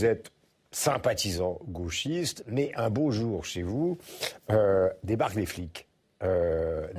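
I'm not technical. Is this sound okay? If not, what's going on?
Yes, no faults can be heard.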